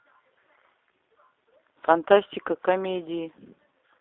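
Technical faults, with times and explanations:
Throughout, G.729 codec: the speech has that rough, slightly synthetic edge of a speech model rebuilt from a vocal tract filter, pitch predictor and a few pulses. It's band-limited to roughly 300 Hz–3.6 kHz, and the damage is plainly audible, which fits an 8 kbit/s G.729A line.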